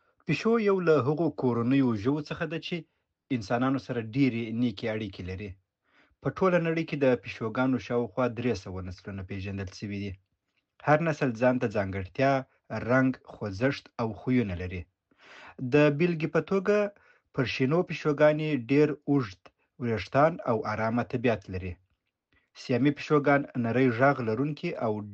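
No technical faults can be heard anywhere in this speech recording. There is nothing in the signal to point to at any moment.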